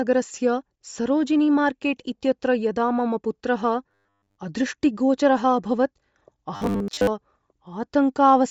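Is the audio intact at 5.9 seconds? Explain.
No. At 5.9 s, as throughout, the speech sounds breathy and grainy, likely Bluetooth LC3 compression at a low bitrate filling the upper band with noise.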